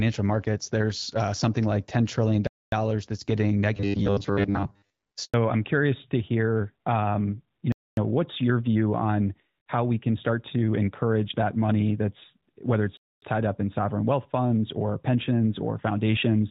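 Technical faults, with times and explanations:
2.47 s, 7.72 s and 12.97 s: gap between chunks. Each is a 250 ms hole, spaced about 5 s apart, which points to the audio being sent in chunks with silence left at each join.
5.24 to 5.34 s: handover gap. The call switched networks, no speech frames arrived for 100 ms, so the voice drops out and whatever was said there is gone.
5.34 s to the end: fallback to narrowband. After the handover the call dropped from the HD Voice codec at 12.65 kbit/s to the older AMR-NB at 12.2 kbit/s. Nothing above 4 kHz gets through, so the speech turns duller and rougher than the wideband stretch before it, which sounds clear.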